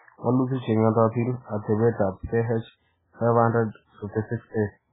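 From start to end the speech is dull, with nothing above 3.8 kHz, and heavily watery and swirly, which points to MP3 compression at a very low bitrate, likely around 8 kbps. Unlike a plain low-pass filter, weak frequency lines flicker on and off between frames, smearing attacks.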